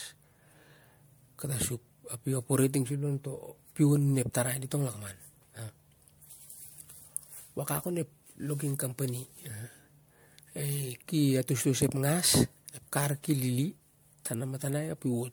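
Throughout the speech, the sound has a swirly, smeared, hollow quality, and consonant attacks are blurred rather than crisp. This is generation loss, likely from the audio being decoded and re-encoded as MP3 about five times, each pass at a rate around 100 kbit/s. Every re-encode quantises on a shifted frame grid, so noise and spectral gaps accumulate beyond what a single encode would leave. The top of the spectrum ends at 20.1 kHz.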